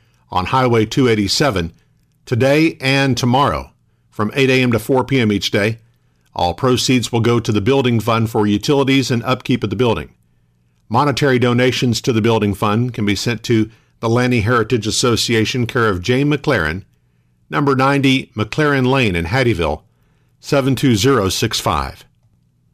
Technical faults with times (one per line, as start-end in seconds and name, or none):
0.00-22.74 hard clipping